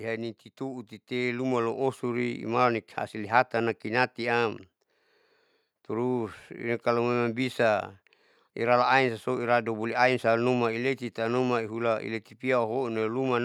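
From 0.57 s to 2.49 s there is automatic gain rising: the gain control judged the input too quiet and stepped its gain up by about 6 dB over roughly two seconds, so the speech and the background noise swell together rather than the speech alone getting louder.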